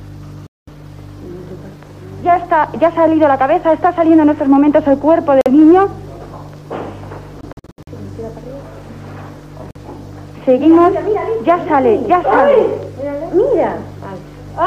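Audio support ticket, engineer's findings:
Abrupt silent gaps at 0.47–0.69 s, 5.41–5.48 s, 7.41–7.89 s, 9.71–9.77 s. Third gap broken into short holes, longest about 70 ms. Sound resumes further on, as if it had played through. Likely Bluetooth dropout: late packets discarded at the headphones.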